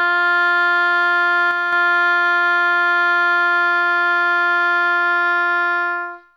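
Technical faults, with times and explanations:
1.51–1.73 s, sudden gain jump: the music and its background noise drop together by about 4 dB, then return. This is likely a gain change applied without any ramp.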